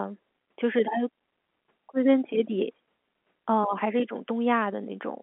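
No faults found: the speech sits on an ordinary telephone line, confined to about 200 Hz to 3.4 kHz in the way G.711 mu-law coding leaves it, which fits a 64 kbps channel, and nothing further stands out.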